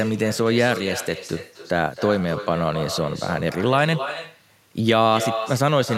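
From start to finish the speech carries an echo with no canceller: the far end's loudspeaker feeds its microphone, returning each phrase around a third of a second later, about 11 dB quieter and thinner. Spectrograms show every syllable's pattern repeated faintly, shifted right.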